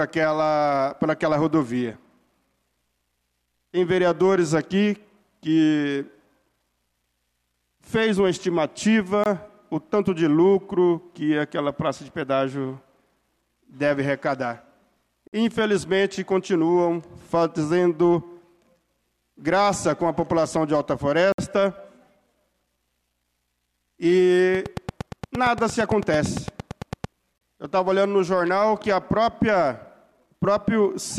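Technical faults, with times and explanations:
9.24, 15.28, 21.32 and 27.38 s: gaps between stream segments. Silent holes of 23, 54, 61 and 33 ms with hard edges recur every 6 s, matching the segment boundaries, where mismatched time stamps leave spaces the player fills with silence. No audio is lost.
24.55 to 27.05 s: train of clicks. About twenty near-identical clicks arrive at a regular 8.8 per second, peaking about 10 dB above the signal and heard as steady ticking over the sound. Likely cause: interference from nearby equipment or a faulty connection or power supply injecting pulses.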